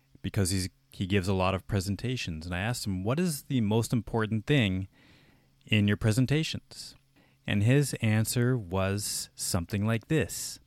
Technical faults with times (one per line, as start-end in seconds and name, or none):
none